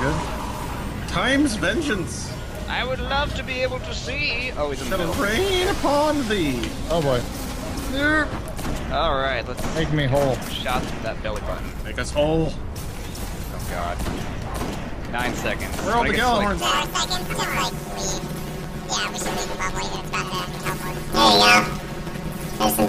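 From 16.60 s to the end at 22.88 s, planar audio is read as interleaved. Each 10.88 ms block of left-then-right samples plays twice at double speed, producing a robotic buzz at 91.9 Hz. Unlike a pitch shift, there is no clear octave jump.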